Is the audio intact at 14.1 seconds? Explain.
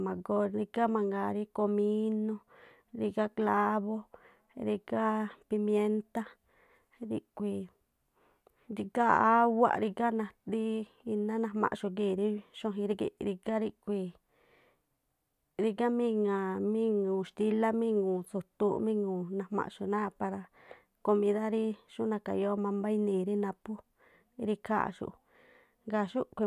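Yes, at 14.1 seconds the speech plays through cleanly, with no dropout, glitch or other fault to be heard there.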